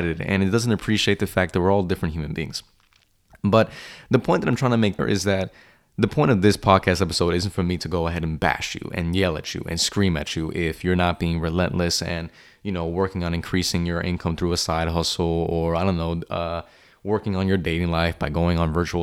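At 4.98 s there's a CD skip in the speech: the laser lost its track and landed on another turn of the spiral, so the player mutes for just a few milliseconds, you hear a small tick, and the speech carries on from a different point.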